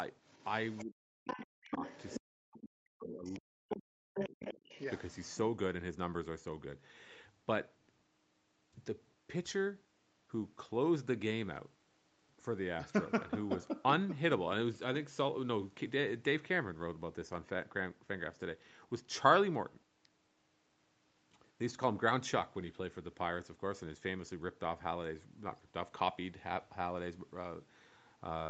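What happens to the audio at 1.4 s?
At 1.4 s the speech is pulled down hard, with the deepest drop around 40 dB, inside a stretch from 0.84 to 1.84 s. This is likely speech suppressed in double talk: with both ends active, the echo canceller could not separate the talker from the loudspeaker return and attenuated everything.

Between 1.27 and 1.46 s, a second voice also comes through, only a few dB below the talker. This is likely the other side's voice leaking through, where the far end played on the loudspeaker and was not fully removed from the microphone signal.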